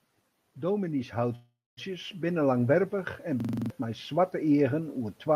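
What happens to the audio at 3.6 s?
At 3.6 s the audio is caught in a system hang loop running from 3.40 to 3.70 s. The system froze while the hardware kept replaying one 42.7 ms slice, which fits a 2048-sample buffer, seven times at 23.4 Hz, giving a rapid stutter. The waveform shows identical repeating blocks, and the spectrogram shows vertical stripes at that rate.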